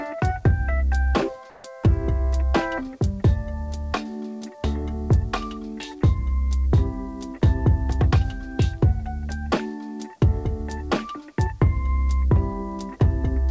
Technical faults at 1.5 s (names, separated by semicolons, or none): comfort noise in place of the background